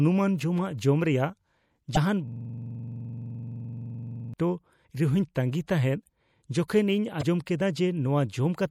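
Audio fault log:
Throughout: MP3 compression. The speech sounds watery and swirly, and the treble is dulled. Sibilants carry a metallic chirp, and consonant onsets smear. The likely cause is heavy MP3 encoding at a low bitrate, plausibly around 64 kbps. With so few bits, the encoder cuts the high frequencies at a fixed point. It also drops weak spectral lines, which flicker on and off from frame to frame. That flicker is the swirl.
1.93–1.97 s, 4.84 s, 7.19–7.23 s: damaged data in a compressed stream. Each is a brief chirp or squawk that breaks into the speech. The first and last last about 40 ms. The middle one is a single blip. Here the compressed data was corrupt. The decoder misread those frames and lost its place. It then searched for the next valid frame header. The garbled output makes the squawk.
2.28–4.34 s: system hang loop. For about two seconds, one 42.67 ms slice of sound repeats exactly. 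It repeats dozens of times at 23.4 Hz. That sounds like a rapid machine-gun stutter with a buzzy edge. The system stalled while the audio hardware kept replaying the same ring buffer. The loop length fits a 2048-sample buffer. Normal sound resumes when the system recovers.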